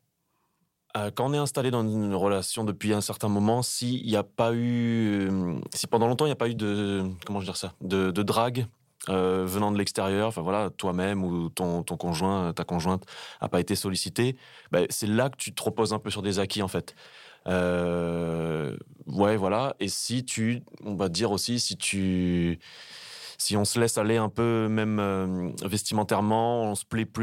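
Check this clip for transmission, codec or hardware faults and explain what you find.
No faults can be heard anywhere in this recording.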